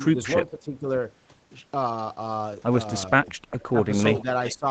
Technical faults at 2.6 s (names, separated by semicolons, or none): none